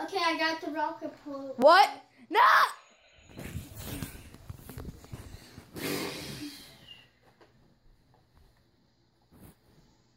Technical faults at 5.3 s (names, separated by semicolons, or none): none